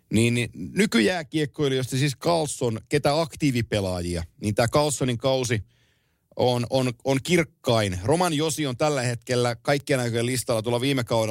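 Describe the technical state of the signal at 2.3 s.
At 2.28 s, right after "niin nykyjääkiekkoilijoista siis", there is a bit error spike: a single sample jumps to about -13 dBFS and snaps straight back, as a flipped bit shifts its value by a power of two. It is heard as one brief, broadband tick. Unlike a dropout click or a splice, nothing is missing and the audio around it runs on unbroken, and the tick has no relation to the speech.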